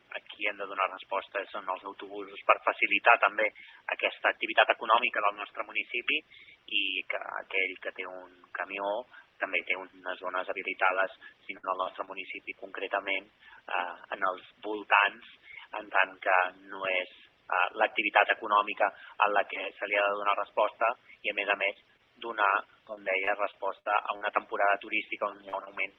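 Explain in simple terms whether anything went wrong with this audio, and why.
Yes, the audio was hurt by parts of the stream going missing on the way, and the receiver covering the holes by guessing.

Burst of packet loss, 11.57 to 11.65 s: a run of about 60 ms of audio never arrived in time. The receiver stretched out the last bit of sound it had and let it fade, so you hear a brief held or fading tone. When the real audio returns, it has skipped ahead, and the piece that belonged in the gap is simply gone.

Short concealed packet loss, at 11.83, 12.05, 21.73, 21.97, 25.49 and 25.65 s: each time only about 20 to 40 ms failed to arrive. The receiver patched each small hole by continuing the sound that came just before, then blended back into the real audio. The result is a quick smear or wobble rather than silence, and a very short sound falling inside one of these holes can disappear entirely.

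Repeated packet loss (robotic sound), 22.95 to 24.23 s: here the losses kept coming, with five separate gaps, the longest about 60 ms, so roughly an eighth of that stretch is guesswork. Each patch barely ends before the next hole begins. Strung together, these repairs make the sound choppy, with small pieces missing throughout that section.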